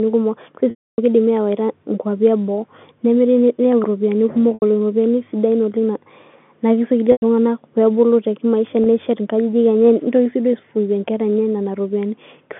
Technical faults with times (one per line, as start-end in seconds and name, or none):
0.70-0.98 packet loss with pitch repetition
4.54-4.62 packet loss with pitch repetition
7.12-7.22 packet loss with pitch repetition
8.84-8.86 packet loss with pitch repetition